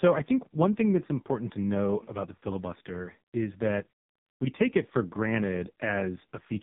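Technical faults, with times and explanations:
Throughout, AMR narrowband mobile codec: nothing above 3.8 kHz, and too few pulses per frame leave the speech heavily buzzy and synthetic, fitting a 5 kbps mode.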